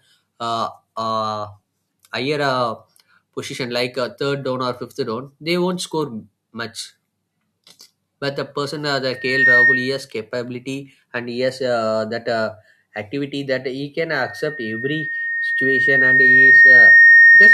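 Speech with a piercing 1.8 kHz loudspeaker feedback squeal: it swells almost instantly at 9.12–10.05 s, then rises slowly from 14.15 s to the end, ending well above the speech. The microphone is re-amplifying its own loudspeaker.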